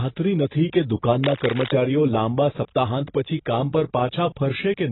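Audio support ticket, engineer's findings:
AAC compression, whole clip: dull, smeared speech with warbling texture and no content above 4 kHz. Likely AAC-LC at low bitrate, consistent with about 16 kbps; encoder lowers the cut-off and coarsely quantises bands, leaving heavy spectral damage.

Cable scratch noise, 1.24 to 1.71 s, between "નથી કે" and "લાંબા સપ્તાહાંત": dense, uneven scratching bursts roughly 10 dB under the speech. Likely a worn cable or connector being moved, its contact resistance fluctuating rapidly and injecting noise.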